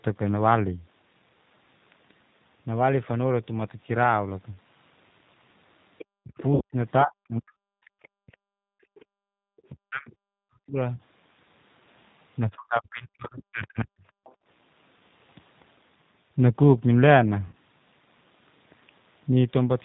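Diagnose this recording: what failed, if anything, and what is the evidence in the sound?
The codec stage failed first, through a G.729 codec at 8 kbit/s. Its damage is plainly audible across the whole clip. The speech sounds rough and slightly synthetic. The decoder rebuilds each 10 ms frame from a vocal tract filter, a pitch predictor and a few pulses. That model cannot carry fine detail. The band also stops at 4 kHz, so the top is dull.

In call processing, the other side's voice is leaking through. A second voice sits under the talker from 5.98 to 6.43 s, at about 20 dB below the speech. It returns from 8.03 to 9.71 s at about 35 dB down, and briefly from 14.24 to 14.34 s at about 30 dB down. The likely cause is the far end playing from a loudspeaker while the echo canceller leaves a residue on the microphone.

Also in call processing, the speech is suppressed in double talk. The talker's level dips sharply from 6.23 to 7.86 s, from 9.70 to 10.81 s and from 12.50 to 14.05 s. 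At its deepest, each dip falls about 40 dB. The first two dips overlap the leaked voice. Both sides were likely talking at once. The echo canceller could not tell its own talker from the echo and turned everything down.

At the network stage, VoIP packet loss is being concealed by the speech codec. Gaps appear at 6.55 to 6.62 s, 10.96 to 11.00 s and 17.47 to 17.55 s. About 60 ms, 30 ms and 60 ms are lost. That pattern points to 30 ms packets. The decoder extends its last pitch and filter and fades the gain. The result is a short buzzy smear. The voice stays weak briefly after packets resume.

Call processing also shows the background gated by the echo canceller. The room sound drops out from 8.14 to 9.42 s, by about 33 dB at its deepest. It drops again from 14.34 to 14.46 s, by about 25 dB. Both dips start while the far side is audible. The canceller clamps the microphone hard while the loudspeaker plays. 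When it releases, the ambience returns.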